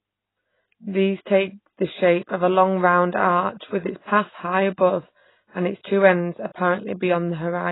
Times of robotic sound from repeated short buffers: none

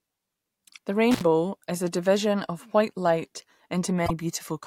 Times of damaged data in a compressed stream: 4.04-4.11

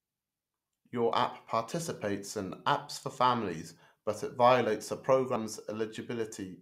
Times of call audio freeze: none

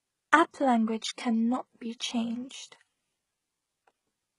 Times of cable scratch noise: none

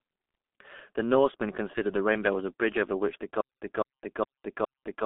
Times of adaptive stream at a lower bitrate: none

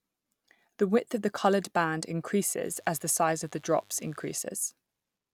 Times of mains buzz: 2.61-4.42

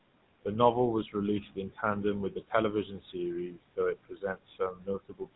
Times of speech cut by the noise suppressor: 1.42-1.83, 2.31-2.53, 2.85-3.15, 3.49-5.36

